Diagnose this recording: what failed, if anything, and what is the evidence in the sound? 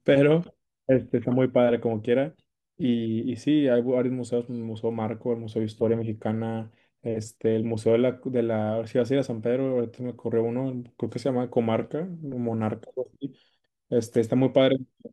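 Nothing in the recording points to a failure at any stage of the chain. No moment in the sound stands out as evidence that calls for a diagnosis.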